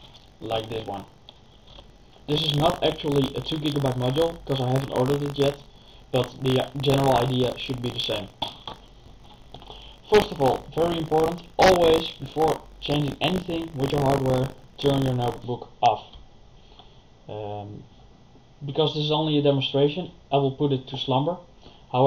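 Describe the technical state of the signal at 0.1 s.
At 0.1 s the signal is affected by buffer tearing, which runs from the start of the clip to about 15.45 s. The writer and the hardware reader of the ring buffer have drifted out of step, so in every period a small slice, a few percent, still holds audio from roughly 40 ms earlier, spliced in with hard joins. Those discontinuities repeat at 50 Hz, which fits a 20 ms buffer period, and produce a steady robotic buzz wherever sound is present.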